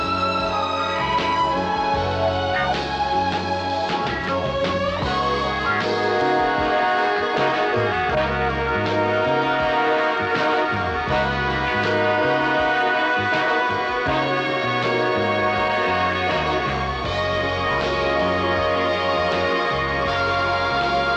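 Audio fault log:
Nothing to log here; there's no fault anywhere in the clip.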